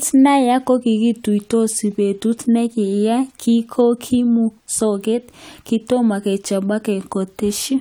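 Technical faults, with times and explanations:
No technical faults detected.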